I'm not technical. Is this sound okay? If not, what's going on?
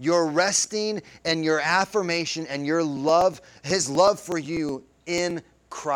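No. Periodic USB or driver dropouts from 2.97 to 5.80 s: every 0.123 s the recording loses a few milliseconds of sound, heard as steady ticking in the speech.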